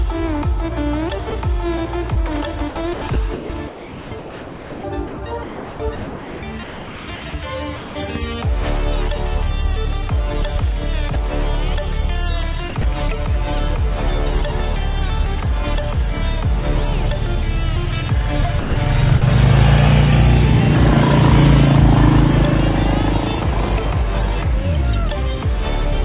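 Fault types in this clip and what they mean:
Sound dropped by the voice detector: at 1.3 and 11.14 s, about 20 ms of sound gives way to comfort noise, likely because the sender's detector judged it background and briefly stopped transmitting.
Short concealed packet loss: at 2.14 to 2.18 s, about 20 ms never arrived in time, and the receiver extended the preceding sound to bridge it, leaving a brief smear.
Sound chopped by the voice detector: from 2.70 to 7.96 s, 12.70 to 12.84 s and 18.60 to 19.22 s, sending likely toggled on and off repeatedly, with comfort noise in the gaps, so the sound turns choppy. Over the first stretch about 3 s in total is replaced.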